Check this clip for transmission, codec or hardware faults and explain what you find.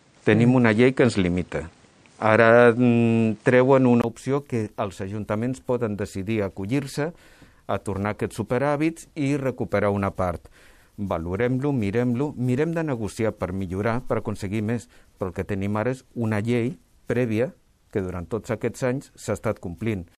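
One fault, at the start. From 0.0 to 4.04 s the input sounds switched to a poorer device, likely a different microphone or headset profile: nothing reaches above 9.4 kHz, level shifts about 5 dB, background noise sits about 40 dB down, and a 20 ms gap marks the switch back.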